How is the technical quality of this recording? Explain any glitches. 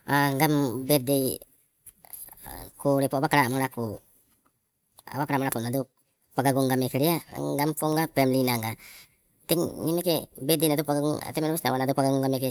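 The recording has one fault, a wrong sample rate, present throughout. The samples are played back faster than they were captured, with no conversion, which fits 32 kHz audio played at 44.1 kHz. The speech therefore runs 1.38 times too fast and sits about 5.6 semitones high, sounding hurried and chipmunk-like.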